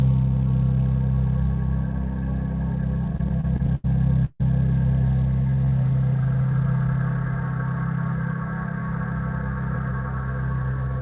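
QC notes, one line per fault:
3.07–3.85 s, repeated stalls (stutter): the sound catches and drags in eight short hitches, each filled by continuing the last sound, the longest about 87 ms, roughly a quarter of the span in all. Packets arrived late, so the jitter buffer kept running dry and the receiver bridged each gap; nothing is lost, only held up.
4.25–4.41 s, call audio freeze: the sound hangs as a smeared, fading continuation for about 150 ms, ending in roughly 40 ms of silence, then resumes where it stopped. The likely cause is packets held up in transit until the jitter buffer emptied, adding about 148 ms of delay without losing audio.
5.42–6.68 s, jitter buffer slow-down: the sound is drawn out and plays at about 89% speed with unchanged pitch. The receiver repeated single pitch periods or bits of pauses, adding about 147 ms to rebuild the buffer's reserve.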